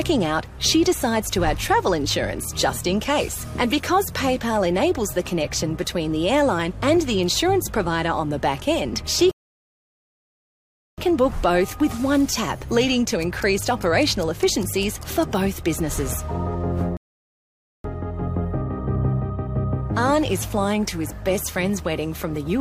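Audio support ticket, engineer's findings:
Rebuffering stall, two occurrences. Player buffer underrun, playback halted until more audio downloaded. Hard cut to silence at 9.31 s, held about 1.66 s, resumes at 10.98 s exactly where it stopped. Second at 16.97 s, about 0.87 s gap, resumes 17.84 s. No content dropped, only dead air inserted, roughly 2.5 s total added. Probable component: network delivery or client buffering, not the encoder.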